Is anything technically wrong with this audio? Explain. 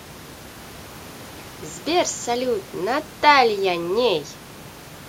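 No, the speech carries only a low room noise sitting about 23 dB below it, which belongs to the recording space and not to the signal chain.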